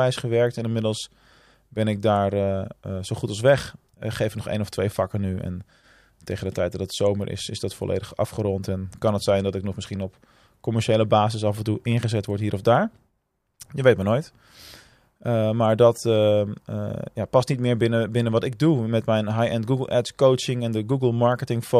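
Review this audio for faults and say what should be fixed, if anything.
Nothing needs fixing: the speech signal holds steady throughout, with no audible technical fault at any point.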